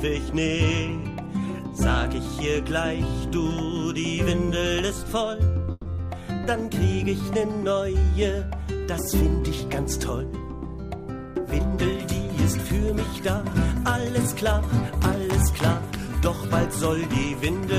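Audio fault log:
5.71–5.88 s, call audio freeze: the last sound stretches into a fading buzz or hiss for 140 ms, then about 20 ms of silence before resuming where it stopped, adding 140 ms of delay; likely late packets emptying the jitter buffer.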